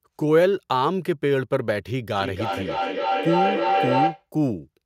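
At 2.17 s a feedback howl starts up and runs until 4.26 s. A microphone-to-loudspeaker loop is adding gain on every pass, so the tone keeps climbing and narrows to roughly 700 Hz. It pulses about every 300 ms and peaks at about the same level as the speech.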